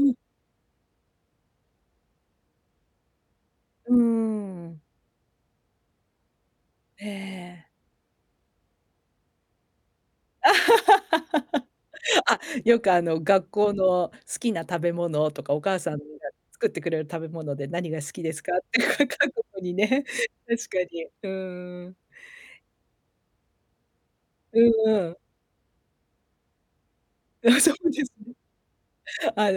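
At 12.34 s the speech falls abruptly by about 6 dB, recovering at 12.43 s. The likely cause is one channel drops out, halving the shared signal in the mono sum. The waveform shows a step down in amplitude; the spectrogram, a thin, uniformly dimmer vertical band.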